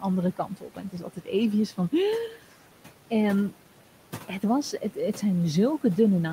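Throughout the clip, a noise suppressor treats the steady room noise as something to remove, lowering it by about 12 dB frame by frame. The noise sinks in the gaps between words and comes back up underneath them, so the background pumps in step with the speech. The room noise itself sits about 18 dB below the speech and belongs to the recording.

From 0.37 to 1.29 s, the noise suppressor cuts speech by mistaking parts of it for background noise. It pulls those moments down with the noise, by about 11 dB at the deepest point, across roughly 300 ms in total, so stretches of the speech sound swallowed or faint.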